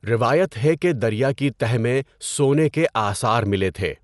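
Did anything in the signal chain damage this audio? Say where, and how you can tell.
Yes: throughout, the speech sounds dull, with nothing above 11.4 kHz and rough, fluttering noise around tones, likely Dolby Digital compression at a low bitrate, around 64 kbps, filling starved frequency lines with noise.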